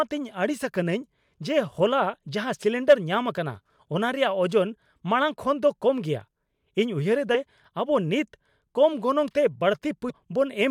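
At 3.78 s, 7.34 s (just after "ᱩᱭᱦᱟᱹᱨ ᱮᱫᱟ") and 10.09 s, damaged data in a compressed stream makes the decoder misread frames and resync, producing brief glitches.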